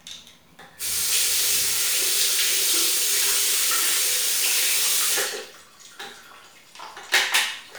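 From 1.88 s to 7.72 s, a brief click recurs every 1.95 s, about four times. These are clock drift buffer slips. Two clocks likely differ by around 100 ppm, so each slip drops or repeats a handful of samples. Their steady spacing distinguishes them from random dropouts.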